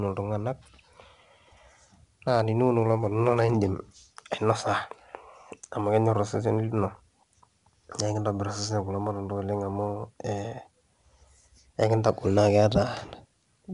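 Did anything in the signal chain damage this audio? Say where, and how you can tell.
Yes, at the codec stage. Across the whole clip the speech carries a gritty hiss that rises and falls with the voice's loudness, roughening every loud syllable and smearing sharp onsets, and the top end stops dead at about 10.7 kHz. That is 4-bit ADPCM compression: each sample is coded as a coarse 4-bit step from a prediction, and the adaptive step size lags the signal, so the error tracks the level. The band limit fits a rate near 88 kbps.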